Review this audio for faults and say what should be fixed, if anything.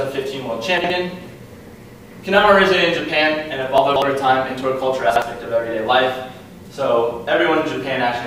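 Chunks out of order at 0.78–0.9 s, 3.78–4.02 s and 5.1–5.22 s: 60 ms pieces land one, three, then one slot late, so the sound jumbles briefly at the hard joins. Fix it by sequence-numbering chunks and reordering before playback.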